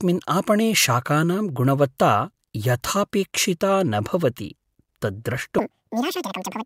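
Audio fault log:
5.59–6.66 s, audio read two samples at a time (double speed): sample pairs are taken as single frames, so the speech plays twice as fast and an octave higher.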